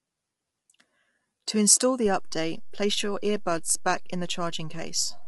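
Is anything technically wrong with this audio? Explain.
Yes, there are two faults in this speech clip.

Throughout, the speech sounds rough and grainy, with noise between the harmonics and nothing above 11.7 kHz. The cause is likely low-delay AAC compression: its short frames resolve pitch poorly, and the damage fits about 32 kbps. The loss of pitch detail and the grain set it apart from plain band-limiting.

At 2.06 s there is a DC step. The waveform's zero line jumps and stays offset to the end. It is heard as one low thump while the speech carries on unchanged, which distinguishes it from a dropout or a click inside the signal.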